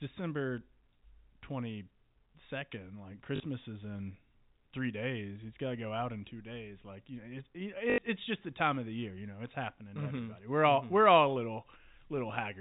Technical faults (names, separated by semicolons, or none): packet loss with last packet repeated